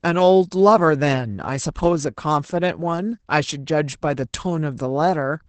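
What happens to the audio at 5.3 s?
At 5.3 s the speech carries the same Opus voice compression heard across the whole clip: nothing above about 8.8 kHz, and a coarsely coded excitation from the SILK linear-prediction coder, leaving it muffled, hoarse and slightly robotic, consistent with roughly 12 kbps wideband operation.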